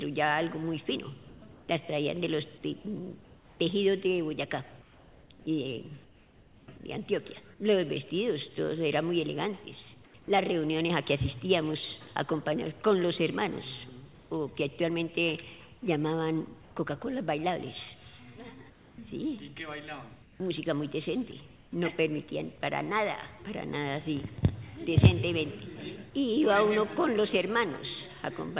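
In the pauses, the real background gives way to a flat, featureless hiss at 1.28–1.68 s, 3.24–6.68 s, 10.06–10.14 s, 14.14–14.3 s, 16.62–16.76 s and 18.7–21.72 s. This is comfort noise in place of the background, likely because the sender stopped transmitting when its voice detector heard nothing and the receiver synthesised a stand-in. It sits about 3 dB quieter at 10.06 s, about 1 dB louder at 14.14 s and level at 16.62 s. At 5.44 s the sound returns abruptly with its soft start missing, an onset clipped by the voice detector, likely from the detector reacting about 20 ms late. Nothing reaches above 4 kHz, which fits the G.711 mu-law call path at 64 kbps.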